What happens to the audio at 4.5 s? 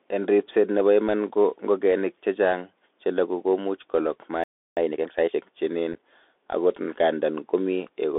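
At 4.5 s the speech is inside a playback stall that runs from 4.44 s to 4.77 s, a gap of about 330 ms. The sound stops mid-flow and the output goes completely silent, then resumes, most likely because the player ran short of data or its thread was held up until it could recover. On a waveform this is a flat line across that span. On a spectrogram it is a fully blank vertical band with sharp edges on both sides.

Around that gap, and through the whole clip, the audio carries the damage of the Bluetooth CVSD headset codec. Its one-bit, adaptive-step coding confines the sound to a narrow line band of roughly 300 Hz to 3.6 kHz. The codec damage is plainly audible. Fast, loud high-frequency sounds outrun the step size and distort, and s sounds come out scratchy over a granular hiss. A spectrogram shows almost nothing above 3.6 kHz or below 300 Hz, with a grainy noise floor filling the band.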